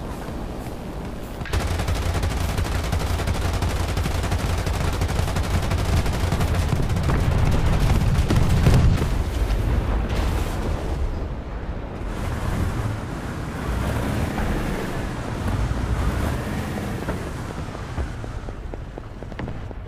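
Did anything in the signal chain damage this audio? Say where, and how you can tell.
Yes. A train of clicks runs from 14.07 s to 19.72 s, just before the end of the clip. About twenty near-identical clicks arrive at a steady 4.1 per second. They stand roughly 10 dB above the surrounding sound, so they tick clearly through it. That regular spacing and repeated shape point to a periodic pulse entering the chain. The likely source is interference coupling into analogue wiring, or a faulty connection or power supply.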